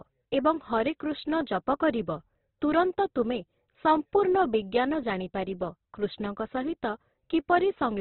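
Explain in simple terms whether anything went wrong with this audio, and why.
Yes. Throughout all 8 seconds the speech sounds grainy, rough and noisy, and nothing above 4.2 kHz survives, so it's dull and boxed-in. This is likely heavy Opus compression. Unlike MP3, it fills gaps with noise rather than swirling.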